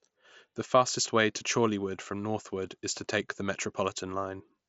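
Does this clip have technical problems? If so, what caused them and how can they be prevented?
No, the speech shows no technical faults; it comes through a wideband Bluetooth headset link working as expected, so nothing needs preventing.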